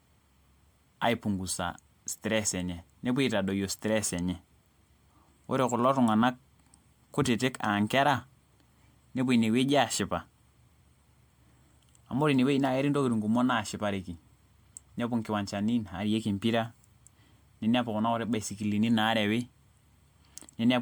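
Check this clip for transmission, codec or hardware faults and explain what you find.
One codec fault runs through the whole speech clip: generation loss. Its likely cause is that the audio was decoded and re-encoded with MP3 around ten times, each pass landing on a shifted frame grid and quantising again, so noise and spectral gaps pile up. The result is swirly, smeared and hollow, with blurred consonant attacks, more degraded than one pass at the 128 kbit/s MP3 rate the sound points to would produce. Nothing remains above 19.9 kHz.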